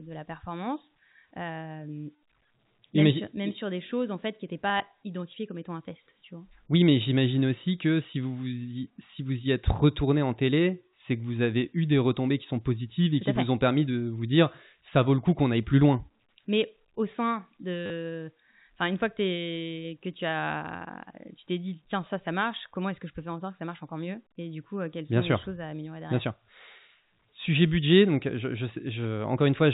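Around 4.68 to 4.8 s, between "en fait qui n'étaient" and "identifiées comme étant un", there's packet loss with the last packet repeated. Dropped chunks get filled by replaying the previous one, so you hear a stuttering patch with gaps of up to 20 ms, which fits 10 ms packets. It happens again at 17.86 s, right after "au sein", as a 40 ms robotic buzz. All of it sits inside the narrow 4 kHz band of G.711 telephone coding.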